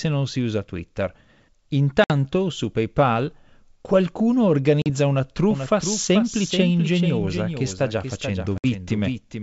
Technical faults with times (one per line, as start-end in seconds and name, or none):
2.04-2.12 packet loss on an ADPCM call
4.82-4.90 packet loss on an ADPCM call
5.51-9.42 doubled audio track
8.58-8.66 packet loss on an ADPCM call